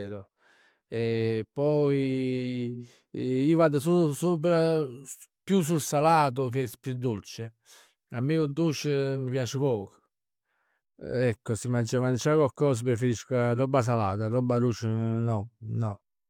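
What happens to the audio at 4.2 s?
Nothing goes wrong at 4.2 s; the speech carries on intact through that moment with no audible fault.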